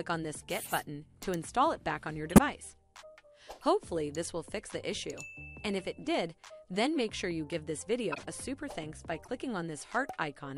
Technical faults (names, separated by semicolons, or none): corrupt frame decoded